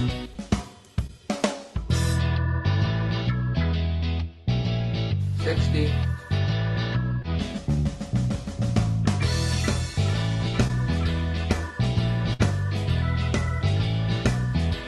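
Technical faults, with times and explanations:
0.33–0.37 s, 1.07–1.10 s, 7.22–7.25 s and 10.67–10.71 s, short concealed packet loss: each time about 20 ms of audio failed to arrive in time, and the receiver covered it by extending the preceding sound for roughly 10 to 19 ms before blending back. The result is a quick smear or wobble rather than an audible gap. Unlike a burst, nothing sustains long enough to turn into a held tone or a fade.
12.33–12.41 s, burst of packet loss: about 60 ms went missing in one stretch, and the concealment ran for nearly all of it, stretching the last sound while turning it down. A voiced sound becomes a brief held buzz, and anything else becomes a fading hiss. The audio then picks up further along with that span gone. This longer, decaying hold is what separates it from the short smears earlier in the clip.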